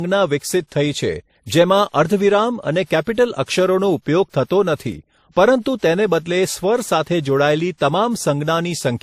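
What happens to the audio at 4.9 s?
At 4.9 s the speech carries two layers of compression smearing, which points to transcoding between lossy codecs, likely a low-rate MP3 re-encoded to WMA. It runs throughout, with nothing above 15.2 kHz; unlike a single codec, the artefacts of both encoders are heard together.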